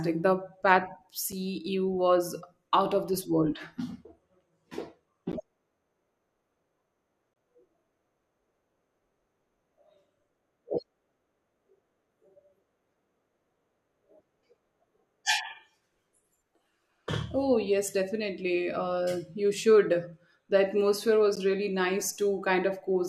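Short holes of silence at 1.32 s, 5.32 s, 7.34 to 7.36 s and 21.36 s (about 5 to 25 ms) are gaps between stream segments. Timestamps between 2 s segments leave small spaces that the player fills with silence. They sound like hard clicky dropouts and appear as flat near-silent slits on the waveform and thin vertical blank stripes on the spectrogram.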